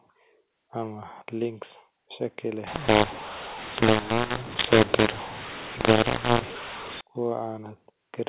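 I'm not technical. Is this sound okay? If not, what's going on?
No. From 2.67 to 7.01 s, just after "links shaki", the speech turns harsh and gritty. That's a mu-law and A-law mix-up: telephone audio decoded with the wrong scale. Unlike simple distortion, the pauses also fill with hiss.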